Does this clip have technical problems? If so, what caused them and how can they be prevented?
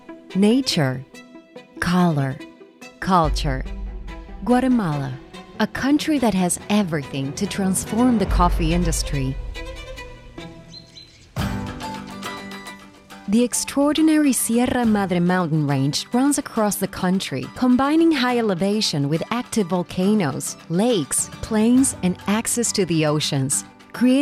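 No technical faults are audible.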